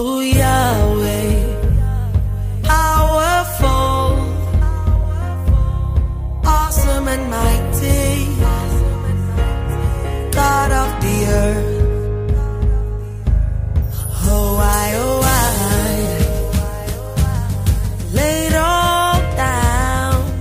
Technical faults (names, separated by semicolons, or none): skip ahead; jitter buffer speed-up